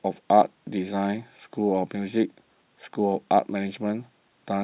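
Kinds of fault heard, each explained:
No technical faults can be heard in this speech.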